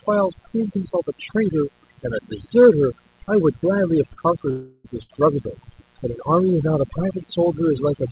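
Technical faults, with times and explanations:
Throughout: mains buzz. A steady, raspy 60 Hz buzz sits under the speech at a strong level, only around 10 dB below it. Sharp switching spikes twice per mains cycle, likely from a dimmer, rectifier or missing shield, spread harmonics far up the spectrum. On a spectrogram this shows as evenly spaced horizontal lines every 60 Hz, running to the 4 kHz ceiling of the narrowband call path. The waveform shows a repeating spiky pattern at 120 pulses per second.
Throughout: overdone noise removal. Noise reduction set far too aggressively has carved the audio into pieces. Any frequency band that falls near the tool's noise estimate is pulled down or switched off, so the quiet parts of the speech vanish with the noise. The pauses drop to near silence scattered with twinkling specks. A spectrogram shows ragged holes and isolated bright dots where smooth texture should be. 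The waveform's pause floor falls almost flat.
4.13–4.20 s and 5.02–5.12 s: short stall from a late packet. In each case a packet arrived late and the jitter buffer ran dry. The receiver stretched the last sound to fill the wait, about 38 ms the first time and 70 ms the second, and then resumed from the same point. Nothing is lost, but the sound is held a little too long, with a faint buzz or dip. On a spectrogram the partials run flat and unchanging for that span. The waveform shows a short, oddly regular stretch.
4.51–4.87 s: call audio freeze. Here the audio hangs for about 338 ms, likely because packets were held up in transit long enough to empty the jitter buffer. The receiver kept extending the last sound as a fading buzz or hiss rather than dropping to silence, then carried on from where it had stopped, so a gap has been inserted and nothing is missing. A spectrogram shows a smeared, static band that fades across the span. 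The waveform holds a decaying stretch.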